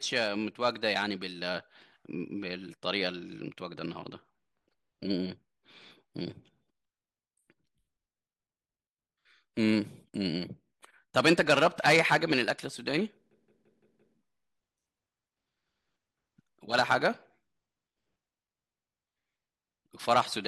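A system hang loop in this speech clip froze the computer or driver while the hardware replayed one 171 ms piece, fitting an 8192-sample buffer, five times at 5.9 per second, heard as a machine-gun stutter from 13.31 to 14.17 s.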